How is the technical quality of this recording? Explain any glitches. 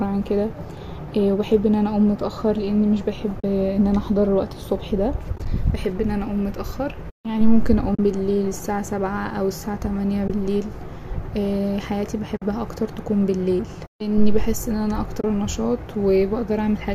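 The speech has six brief holes, all from AAC frame loss with muting. They fall at 3.40 to 3.44 s, 5.36 to 5.46 s, 7.95 to 7.99 s, 10.28 to 10.30 s, 12.37 to 12.42 s, and 15.21 to 15.24 s.

Most are single gaps of 20 to 50 ms. The one near 5.4 s is broken into short gaps spread over 100 ms, none longer than about 20 ms. Their lengths fit lost frames of about 10 ms each. When frames go missing, the decoder silences them and the overlapping windows fade the sound out and back in. The result is a soft-edged hole, unlike the abrupt, clicking cut of a hard dropout.

A faint roughness across the speech is likely from low-delay AAC compression.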